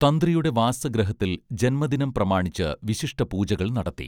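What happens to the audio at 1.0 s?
Nothing goes wrong at 1.0 s: the speech carries on intact there, with no dropout, click, distortion or other fault at that moment.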